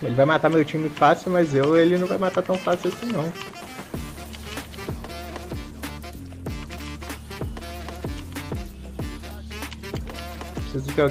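No technical faults can be heard anywhere in this audio. Nothing in the sound stands out as a problem at any point.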